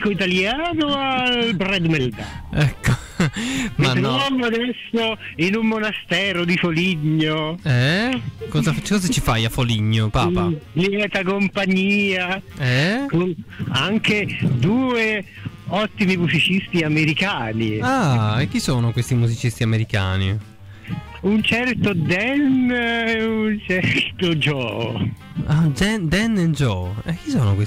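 No technical faults are audible.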